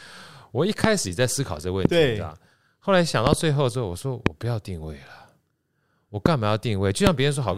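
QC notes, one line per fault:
0.84–0.86 s, 1.85–1.87 s, 3.27–3.35 s (two pops in quick succession), 4.26–4.29 s, 6.26–6.28 s, 7.07–7.09 s, loud pop: sharp thumps peaking about 20 dB above the speech, which continues underneath. The likely cause is a sudden voltage pulse, from a plug, switch, static or driver glitch, that downstream circuits shape into a brief click. On the waveform each pop is a tall spike standing out from the speech envelope; on a spectrogram it is a thin vertical broadband stripe.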